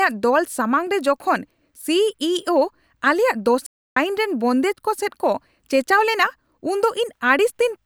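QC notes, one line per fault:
3.66–3.97 s, playback stall: the speech halts mid-flow, silence lasts 0.3 s, then the sound picks up again, likely because the player ran out of data or its thread was blocked. The waveform goes flat, and the spectrogram shows a blank vertical band across all frequencies.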